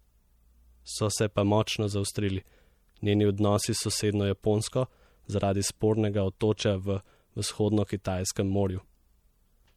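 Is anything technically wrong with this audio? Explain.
Yes. Plainly audible MP3 compression runs throughout the speech, likely from an encode around 64 kbps. Starved of bits, the encoder switches weak frequency lines on and off between frames, leaving a watery, swirly texture.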